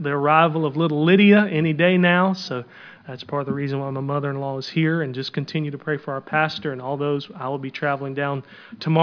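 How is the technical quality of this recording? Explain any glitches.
Nothing stood out on listening, and there were no glitches to explain in this recording.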